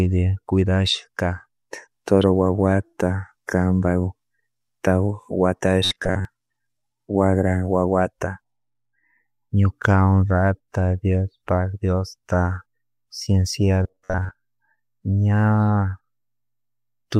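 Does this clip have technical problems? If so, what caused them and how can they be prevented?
Yes. Robotic sound from repeated short buffers appears at 5.85–6.25 s and 13.83–14.31 s: the speech becomes a rigid metallic buzz near 94 Hz, likely from audio arriving late so a roughly 11 ms buffer is replayed over most of each span. Prevent it with larger jitter buffers and steady scheduling.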